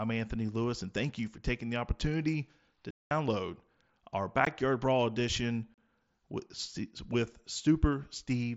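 Unconcealed Bluetooth headset packet loss. Just after "taking the opportunity to", sound drops out from 2.91 to 3.11 s, a 0.2 s hole. Shorter gaps hit at 4.45 s and 5.74 to 5.78 s. Lost headset packets became silence, leaving abrupt holes across the wideband mSBC link.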